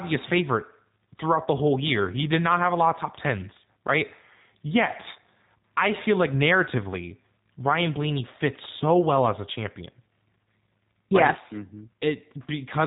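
Throughout the speech the sound is band-limited and slightly rough, with a synthetic, buzzy edge and nothing audible above about 3.8 kHz, so sibilants lose their sharpness and the tone is boxy. The codec damage is plainly audible: this is G.729 coding, which fits an 8 kbit/s rate. It rebuilds each 10 ms frame from a vocal tract filter, a pitch predictor and a few coded pulses, discarding the fine detail of the original waveform.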